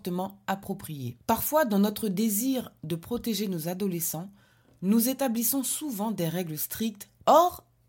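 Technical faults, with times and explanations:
Nothing stood out as a technical problem on listening to this speech recording.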